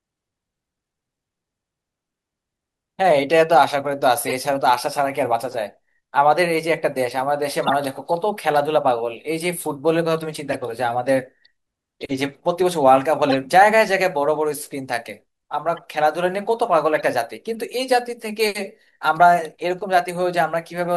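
Short chirps and bursts of noise cut through the speech at 4.24–4.34 s, 7.63–7.73 s, 10.52–10.55 s, 13.29–13.35 s, 15.76–15.79 s and 16.95–17.04 s. The one near 7.7 s is loudest and the one near 15.8 s is faint. Each is a corrupt frame decoded: flipped bits in the compressed data made the decoder misread gains or codes, spraying energy across wrong frequencies for about the length of the damaged frames.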